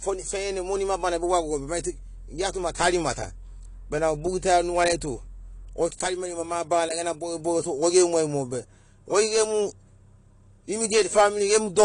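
Throughout the speech the sound is dull and smeared, with nothing above 10.2 kHz and a fizzy, grainy texture on sibilants. This is likely AAC compression: the encoder cuts high frequencies and coarsely quantises what remains, which fits a low bitrate near 32 kbps.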